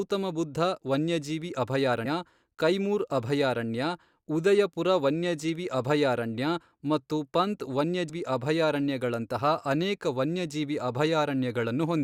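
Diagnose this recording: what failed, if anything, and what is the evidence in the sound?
At 2.05 s, between "ಬುದ್ಧ ವನ್ಯಜೀವಿ" and "ಕೈಮೂರ್ ಅಭಯಾರಣ್ಯ ಉದಯಪುರ ವನ್ಯಜೀವಿ", and at 8.1 s after "ವನ್ಯಜೀವಿ ಅಭಯಾರಣ್ಯ ಮತ್ತು ಪಂತ್", the speech jumps forward roughly 100 ms and 150 ms. These are compressed frames skipped at the codec stage. Damaged or missing frames were not decoded, and the jump sizes fit 20 ms frames.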